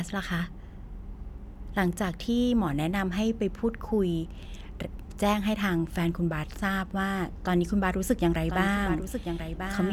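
Doubled audio track from 8.31 s onward: a copy about 10 dB quieter cuts in abruptly, trailing roughly a second behind, likely via a slower capture path.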